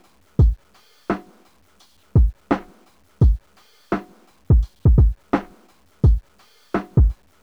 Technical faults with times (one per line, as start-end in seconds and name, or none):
0.00-7.42 low bit depth without dither